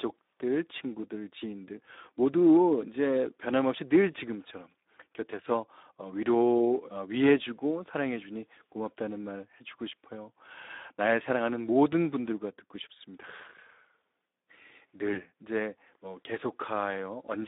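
Throughout, the Speex codec leaves the audio hoarse and grainy, confined to a narrow 250 Hz to 3.7 kHz band. The damage is plainly audible, consistent with a low bitrate of around 11 kbps. A spectrogram shows smeared, noisy harmonics and nothing above 3.7 kHz.

From 15.13 to 15.23 s, VoIP packet loss concealed by the speech codec stretches the last sound into a brief fill that fades, which fits one lost 20 ms frame. Distortion lingers as the decoder recovers. The waveform shows a decaying stretch.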